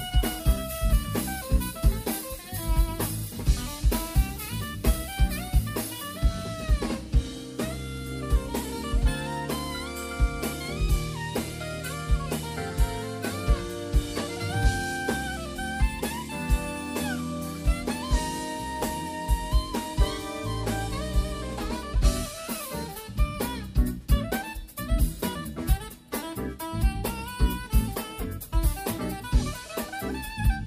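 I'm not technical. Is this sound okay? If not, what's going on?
No. At 18.83 s there's a brief garbled moment: chunks out of order, where a 5.8 ms slice of audio arrived one chunk late and played after its neighbour.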